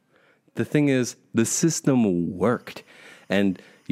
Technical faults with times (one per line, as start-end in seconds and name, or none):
2.52-3.92 timecode bleed